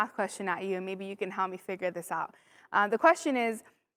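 No technical faults can be heard in the recording; the signal stays continuous throughout.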